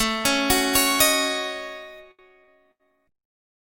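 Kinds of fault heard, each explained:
pre-emphasis left on: From the start to 2.0 s the treble is boosted by about 11 dB at 10 kHz relative to 1 kHz, a tilt that fits the 50 µs FM curve with no matching de-emphasis applied. The sound is thin, bright and hissy. Unlike a simple treble-shelf mistake, the boost rises steadily with frequency in that characteristic curve, and it ends abruptly at 2.0 s rather than persisting.
short stall from a late packet: Between 2.11 and 2.30 s a packet arrived late and the jitter buffer ran dry. The receiver held the last sound for about 73 ms, then carried on from the same point, so nothing is lost. Instead the timing is pushed back, with a brief drawn-out buzz. That separates it from packet loss: the held sound is inserted, and the audio afterwards is intact and continuous.
short concealed packet loss: Around 2.44 to 2.50 s roughly 40 ms of audio never reached the decoder. 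The receiver bridged the hole with about 37 ms of continued sound before blending back into the real signal, giving a brief smear or wobble. Unlike the stall, material is actually missing here.
call bitrate drop: From 2.66 s to the end, about a second, the coding turns coarse and watery and the top end is cut off near 12 kHz instead of 20 kHz. The change fits a fall from around 96 kbps to about 17 kbps. It differs from simple low-pass filtering because the roughness and smeared detail come with the band-limiting, and from loss because nothing is skipped.
burst of packet loss: Between 2.71 and 2.82 s about 80 ms went missing in a row. The receiver extended the last sound and let it fade as a held buzz or hiss, then resumed further on with the middle portion gone. It is longer than the short concealed loss at 2.44 s, and unlike the stall the audio jumps ahead rather than picking up where it paused.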